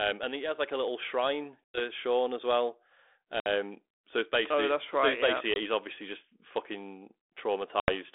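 Speech over a narrow phone line that sounds like 32 kbit/s G.726 ADPCM, with packet loss on an ADPCM call: dropouts of 100 ms after "like a little shrine" at 1.65 s, 60 ms after "as well" at 3.40 s, 20 ms at 5.54 s and 80 ms at 7.80 s, each a hard silent gap where the decoder's predictor slips and the speech comes back briefly slightly distorted.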